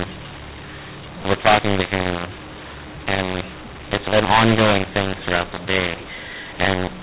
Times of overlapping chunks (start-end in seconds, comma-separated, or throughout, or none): none